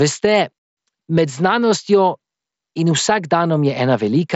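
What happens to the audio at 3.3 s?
Nothing goes wrong at 3.3 s: the speech carries on intact through that moment, passing through the Bluetooth mSBC headset link with its usual wideband limit of about 7.7 kHz.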